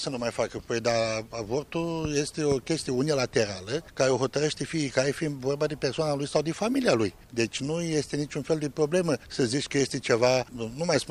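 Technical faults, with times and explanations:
No technical faults detected; nothing audible to log.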